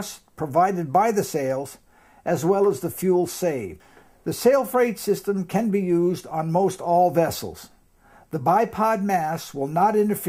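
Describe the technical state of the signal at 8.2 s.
Nothing at 8.2 s points to a fault; the signal is intact at that moment.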